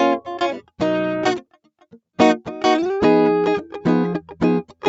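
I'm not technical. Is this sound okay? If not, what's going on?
No. Throughout this piece of music, the sound gently swells and sinks in loudness. Held parts and lingering tails seem to fade a little while sharper hits come through, giving a slight pumping, unsteady feel. The cause is a noise suppressor applied to music or sounds. This is a filter designed for phone and video calls that tries to remove background hiss. It mistakes steady musical tones and reverb for noise and keeps turning them down.

The clearest problem comes between 1.4 and 2.18 seconds. For roughly 0.4 seconds of that stretch the music drops sharply, at its worst almost vanishing before it recovers. This is sound cut by the noise suppressor. At that point the filter decided the music itself was unwanted noise and pushed it far down, so a smooth or fading passage briefly dips away.

The audio also has a slightly muffled top, with nothing above 8 kHz. 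That comes from the normal call connection it travelled through, not from these faults.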